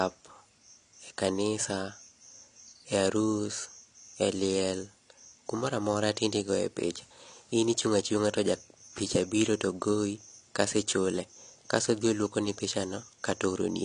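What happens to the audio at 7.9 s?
At 7.9 s the speech sounds dull and smeared, with a fizzy, warbling edge on sibilants, as it does throughout; this is likely AAC compression, consistent with roughly 32 kbps.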